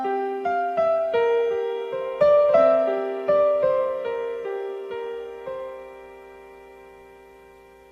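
No dropouts, distortion, glitches or other technical faults can be heard anywhere in the recording.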